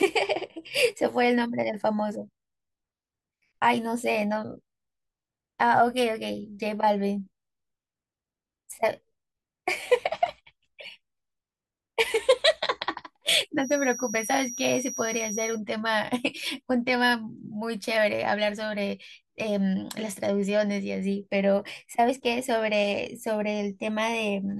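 From 13.55 s to 15.61 s a feedback whistle sits behind the speech: a thin, steady tone at 5.8 kHz, swelling and fading slowly in level and staying roughly 10 dB below the voice. The likely cause is a loudspeaker-to-microphone loop hovering right at the edge of oscillation, so gain at that one frequency is just high enough to keep ringing without building into a full howl. The whistle stops at 15.61 s.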